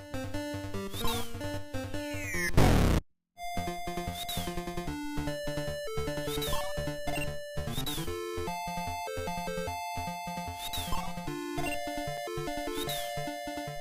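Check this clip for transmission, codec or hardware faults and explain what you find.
Three faults are audible: one forward jump in the stream and two brief dropouts to digital silence.

Stream segment skipped, 3.35 to 3.41 s: The player most likely failed to load one piece of a segmented stream and moved straight on to the next, so a stretch of the programme never arrived. The audio lurches forward with a small blip at the join. The continuity breaks abruptly, and the material on either side doesn't connect.

Block of digital silence, at 9.96 s and 12.17 s: Each time, a run of samples was overwritten with zeros, because the output buffer wasn't refilled in time or a calculation produced unusable values. The first gap lasts about 1.33 ms, which fits a 64-sample block. The second lasts about 4.4 ms. With no fade at either edge, the sound cuts out and back instantly. The shorter gap is heard as a tick, and the longer as a tick or dip.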